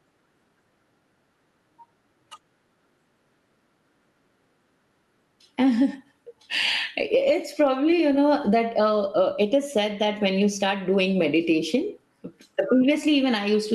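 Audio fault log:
throughout gain pumping: gain swings around 10 dB, flattening dynamics, likely from excessive mic gain driving a fast limiter.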